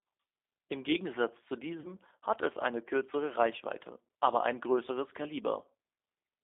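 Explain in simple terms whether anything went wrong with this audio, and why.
Throughout the clip, the speech passes through the G.729 codec, which rebuilds the voice from a rough model, so it sounds slightly rough, synthetic and muffled, with no highs.

From 1.80 to 1.91 s there was VoIP packet loss concealed by the speech codec. About 40 ms of audio went missing, and the decoder filled the gap by stretching the last sound into a fading buzz or noise just before "hat es eine kürzere".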